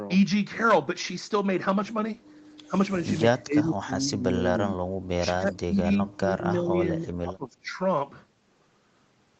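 From 3.45 to 4.43 s and again from 4.75 to 7.8 s the speech sinks in level, most likely speech suppressed in double talk: the echo canceller mistook overlapping talk for echo and attenuated it. It dips by about 15 dB, then by about 25 dB in patches totalling about two seconds, visible as sagging waveform envelopes and faded spectrogram bands.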